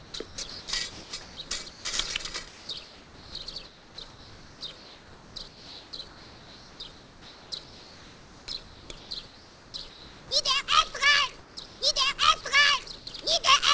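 Discontinuous transmission, likely driven by the sender's voice detector, replaces the real background with comfort noise from 0.00 to 1.37 s: a smoother, featureless noise with no detail.

At 0.11 to 0.14 s, an onset clipped by the voice detector drops 30 ms, so the sound starts abruptly, without its soft beginning.

Comfort noise in place of the background returns at 1.70 to 1.85 s (about 3 dB quieter), 2.48 to 2.69 s (about 2 dB quieter), 3.65 to 7.52 s, 8.63 to 10.31 s, 11.39 to 11.81 s, and 12.98 to 13.07 s (about 5 dB quieter).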